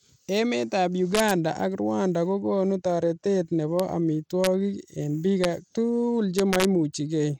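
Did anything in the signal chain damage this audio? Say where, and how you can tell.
Yes. At the codec stage the whole clip carries the sound of Bluetooth SBC compression, likely sent over a Bluetooth link. The treble is thin and unsteady, flickering in and out, with a gritty, grainy layer riding on the speech throughout. That comes from the coder's coarse sub-band quantisation, where the weaker high bands get too few bits. The damage fits a low bitrate of about 96 kbps, and nothing survives above 19.8 kHz.

The second fault is integer overflow in a gain or sample-format stage, where loud peaks wrapped to the opposite sign instead of being limited. Each wrap is a violent crack, far harsher than clipping. They occur at 1.15–1.31 s, 3.80 s, 4.44–4.47 s, 5.44 s and 6.39–6.65 s. The peaks exceeded full scale by only about 0 to 2 dB, yet each overshoot swings across the entire range.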